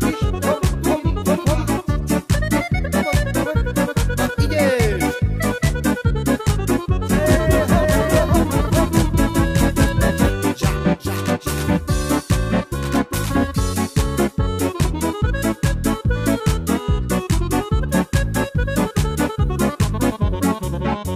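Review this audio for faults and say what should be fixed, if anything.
Doubled audio track, 7.13 to 10.31 s: a second, full-band copy of the sound runs about half a second behind the original and at roughly the same level, so everything is heard twice in that span. The copy has no decay or room colour and cuts in and out abruptly at both ends, which likely points to a second capture through a slower path or an edit leaving two offset copies. Prevent it by routing each source through one capture path and checking edits for overlapping duplicate regions.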